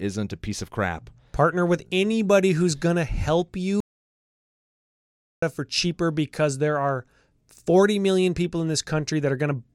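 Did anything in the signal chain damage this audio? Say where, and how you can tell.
Yes. There's an audio dropout to silence from 3.80 to 5.42 s, right after "anybody who's gonna help", and the speech comes back mid-flow at "for cheaper because there". That's about 1.6 s of silence with no room tone at all, so the input likely dropped out at the device or link while the recorder kept writing.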